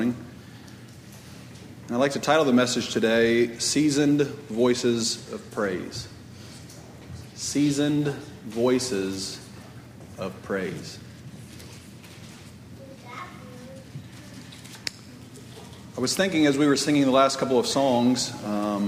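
No technical faults are audible.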